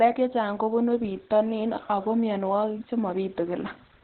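Throughout the clip the speech sounds muffled and hoarse, with nothing above 4.2 kHz and a rough, heavily degraded texture. The likely cause is Opus compression at a very low bitrate, consistent with narrowband SILK speech mode at around 12 kbps.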